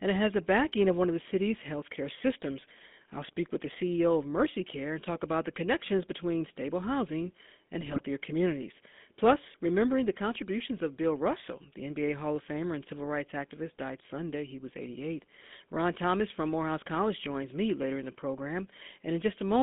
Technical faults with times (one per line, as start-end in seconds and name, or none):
0.00-19.62 GSM full-rate codec
7.81-8.02 GSM bit errors